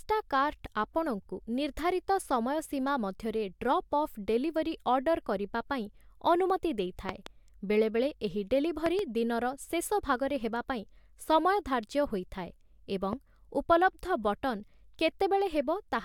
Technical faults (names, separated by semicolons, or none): loud pop